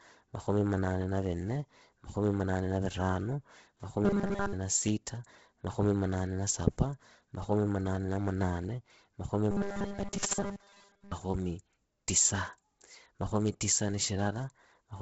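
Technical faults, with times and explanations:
Throughout: Bluetooth LC3 compression, likely running at a low bitrate near 16 kbps with 10 ms frames. The encoder discards most of the upper spectrum and patches it with noise. Nothing remains above 7.7 kHz, and the speech carries a heavy breathy, grainy edge.
4.05–4.53 s and 9.51–11.13 s: robotic sound from repeated short buffers. New audio arrives too rarely, so playback keeps looping a stored slice of about 5 ms and skips most of the real signal. Those repeats impose a rigid 200 Hz metallic buzz. The first burst ends just before "na sita makhomi munane", and the second begins right after "munane na munane makhomi", a likely buffer underrun.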